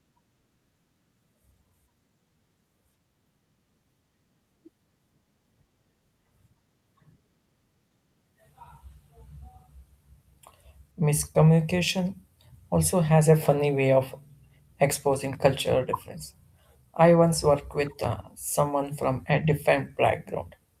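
No technical faults can be heard anywhere in the speech.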